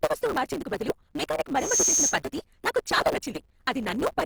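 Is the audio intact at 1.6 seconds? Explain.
No. At 1.6 s you're just inside a loudspeaker feedback squeal, running from 1.57 to 2.19 s, right after "వస్తువు మార్చేందుకు బదులు మెకానిక్". A 6.4 kHz tone swells over roughly a third of a second to about 5 dB above the speech, because the mic is picking up its own speaker and that frequency keeps feeding itself.

Underneath, there's a block size mismatch with truncation, present throughout. Each block loses its tail, which gives a 150 Hz buzz, and the speech runs 1.6 times fast at about normal pitch. That fits 512-sample blocks being cut short.

The speech also sounds grainy and rough, likely from Opus compression in its music mode at a low bitrate. The full bandwidth is still there, up to about 20 kHz.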